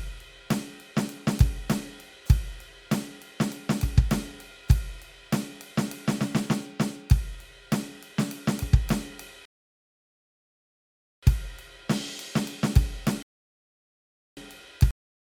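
A music clip with two rebuffering stalls: playback halts into silence from 9.45 to 11.23 s and from 13.23 to 14.37 s, then resumes exactly where it stopped. Unlike a dropout, nothing is skipped; about 1.8 s and 1.1 s are simply added. At 14.91 s there is a cut-off end: the music stops mid-sound and drops straight to digital silence with no decay, because the final buffers were never played, not because it was faded out.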